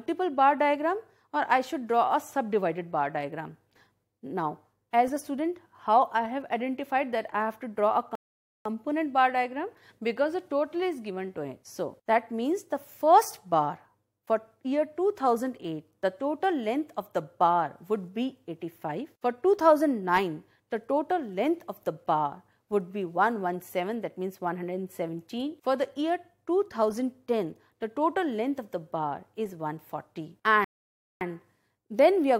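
At 8.15 s the sound drops to silence and picks up again at 8.66 s, and the same thing happens from 30.64 to 31.21 s. Both are rebuffering stalls: the player used up its downloaded audio and just waited for more. The first adds about half a second, the second about 0.57 s. When it comes back, it resumes right where it left off with nothing skipped, so you get a dead gap rather than a jump.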